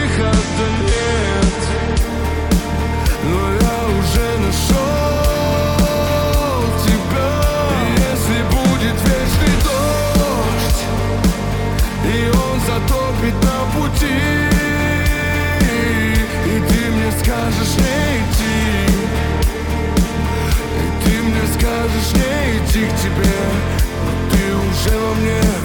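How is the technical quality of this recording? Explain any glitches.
The first two seconds are degraded, then quality jumps. This is an adaptive stream starting at a low bitrate: from 0.0 to 2.0 s the player served a cheap version, consistent with roughly 40 kbit/s MP3, before switching to a richer one, likely near 128 kbit/s. Until then nothing above 10.6 kHz survives and codec artefacts are strong; at 2.0 s the treble returns abruptly without any gap.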